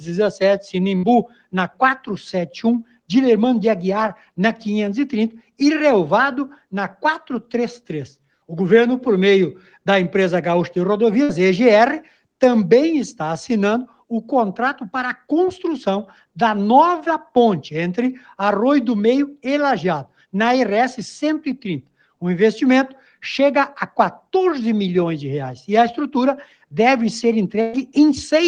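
At 0.97 to 1.06 s the sound is briefly held and fades for 55 ms, then jumps ahead, about 60 ms missing. This is a burst of packet loss: the receiver stretched and faded the last sound, then resumed later. It recurs at 11.23 to 11.32 s (61 ms filled, 60 ms missing) and at 27.61 to 27.76 s, longer, with 120 ms filled and 120 ms missing.

Between 1.28 and 1.54 s, from 2.84 to 3.10 s and from 13.87 to 14.11 s, steady portions sag in level or their tails are clipped short, by about 12 dB, 12 dB and 9 dB at deepest, each over roughly a fifth of a second or less. This is sound cut by the noise suppressor, which mistook it for noise and attenuated it.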